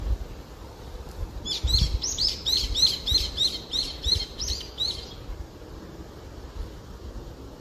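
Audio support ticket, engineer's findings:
Generation loss, full clip. Swirly, hollow, smeared everyday sounds with blurred attacks. Spectrogram shows a hard ceiling at 14 kHz and speckled holes below it. Waveform transients are softened. Likely cause: about five AAC-LC passes, fitting 64 kbit/s, each requantising on a shifted frame grid.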